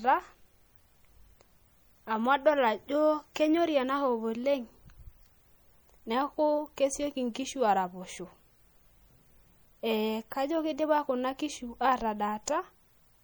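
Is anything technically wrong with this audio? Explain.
Yes. Throughout the speech, MP3 compression damage is plainly audible. Weak frequency lines flicker between frames. That gives a watery, swirly texture, chirpy s sounds and smeared attacks. The likely cause is encoding at around 64 kbps.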